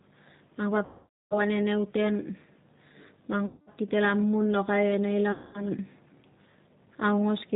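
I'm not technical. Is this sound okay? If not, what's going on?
No. The call ran through the G.729 codec, a low-data phone codec that rebuilds speech from a rough model and drops everything high-pitched, so the speech sounds muffled, rough and slightly robotic throughout.

There is also VoIP packet loss concealed by the speech codec. Chunks of audio went missing in transit, and the decoder guessed at them by stretching the last sound it had, producing a fading buzz or smear. This happens from 0.85 to 1.38 s, from 3.46 to 3.69 s just before "kite la mun lokai", and from 5.32 to 5.65 s just after "mun lokai e nei".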